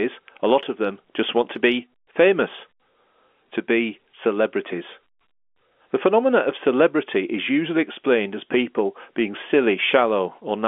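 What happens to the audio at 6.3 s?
Nothing goes wrong at 6.3 s: the speech continues intact through that moment, carried as usual in the narrow telephone band of the G.711 line.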